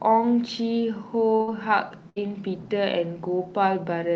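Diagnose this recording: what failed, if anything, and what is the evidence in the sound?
Short concealed packet loss, 1.35 to 1.41 s, in the network stage of the call. About 40 ms of speech never reached the decoder in time. The receiver stretched the preceding sound across the gap and blended back, leaving a brief smear or wobble.

Burst of packet loss, 1.41 to 1.49 s (directly following the first gap) and 2.09 to 2.18 s. Each time about 60 ms of speech was lost in transit. The decoder extended the last sound while fading it, so a held buzz or dying hiss replaces the missing stretch before speech resumes further on.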